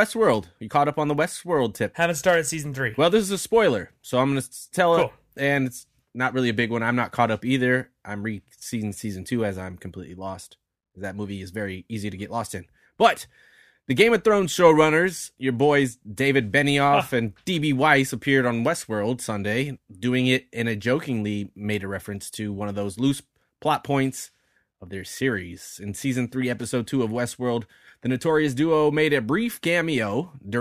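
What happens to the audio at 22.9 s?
Nothing goes wrong at 22.9 s; the speech there comes through intact, with no dropout, click, distortion or other fault.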